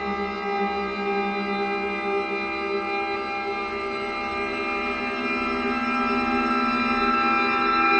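At 3.15 s and 4.52 s, compressed frames are skipped: missing or rejected frames drop roughly 200 ms, then 100 ms, of sound, and the audio jumps ahead each time.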